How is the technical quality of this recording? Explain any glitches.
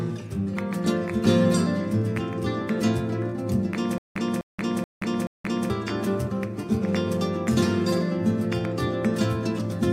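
The recording has one glitch, a stutter with silent gaps, from 3.98 to 5.70 s. A 254 ms fragment repeats four times, each followed by about 176 ms of silence, likely from a stalled stream replaying its last buffer.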